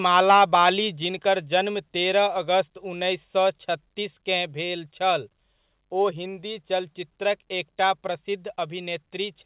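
A speech recording that opens with a harsh, crackly edge on its loudest syllables from 0.17 to 0.69 s. The peaks sound flattened and gritty rather than full. This is microphone overload, likely from an input volume set too high, so the signal ran about 5 dB past the converter's ceiling and the tops of the waveform were sheared off on around 2 percent of samples. Those squared-off peaks generate the added distortion. At 1.02 s the voice and the background drop together in a single abrupt step of about 3 dB. That matches a microphone volume stepped down, likely by call software reacting to the distorted peaks just before it and cutting the device's input gain in one move rather than fading it. Throughout, the sound is band-limited with nothing above 4 kHz, which fits a G.711 A-law call path at 64 kbit/s.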